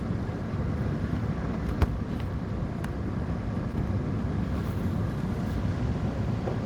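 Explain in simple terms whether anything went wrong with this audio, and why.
Around 3.72 s, a tiny piece of the audio stream, about 10 milliseconds' worth, arrived too late to be played. This is a short concealed packet loss: the receiving end covered the gap by stretching out the sound that came just before, for about 9 milliseconds, then blended back into the real audio. To the ear it comes across as a very brief smear or wobble in the sound at that moment.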